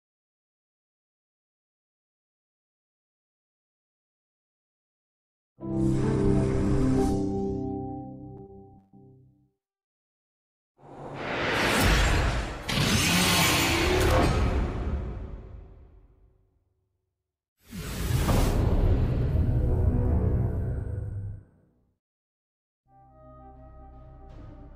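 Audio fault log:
8.46–8.50 s, short stall from a late packet: the sound briefly hangs, with one moment held about 20 ms too long and carrying a slight buzz or dip before it moves on. A packet missed its playout time and the jitter buffer ran dry, so the receiver stretched the last audio it had to cover the wait. When the packet arrived, playback resumed at the same point. Nothing is lost, but everything after runs 20 ms late.
8.78–8.95 s, call audio freeze: the sound locks onto a fading buzz or hiss continuing itself for about 144 ms. It never drops to silence before normal audio returns. The likely cause is packets delayed in transit that emptied the jitter buffer, with the receiver extending the last sound to fill the wait. Playback then picked up where it had stopped, so nothing is missing, but a 144 ms gap has been inserted and pushes the rest of the audio later.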